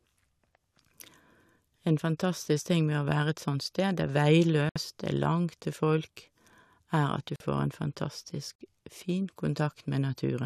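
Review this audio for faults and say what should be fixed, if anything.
Three corrupt frame muted dropouts in the speech, at 4.69 to 4.77 s, 7.36 to 7.44 s, and 8.58 to 8.61 s. The decoder rejected damaged compressed frames and the player dropped in silence instead, so each hole cuts in abruptly without shifting the timing. The longer two sound like a few frames' worth. Adding error checking or retransmission on the transport would catch corrupted frames and get them resent before they reach the decoder.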